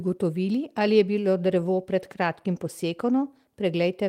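No technical faults can be heard anywhere in this recording. The speech continues without any audible disturbance from its first moment to its last.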